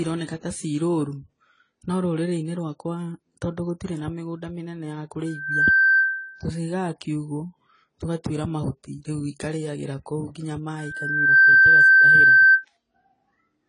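Throughout the speech nothing is present above 10 kHz, and the sound carries layered artefacts. This is likely transcoding between lossy codecs: a second low-rate encoder, consistent with AAC-LC following HE-AAC, re-encodes the first one's artefacts and adds its own.

From 5.26 to 6.49 s a loudspeaker feedback squeal appears. A single tone at 1.6 kHz swells over just under half a second to about 10 dB above the speech. The microphone is re-amplifying its own loudspeaker output, and the loop gain at that frequency exceeds one. It returns from 10.78 to 12.65 s, building more slowly over roughly 0.7 s and peaking at about 15 dB.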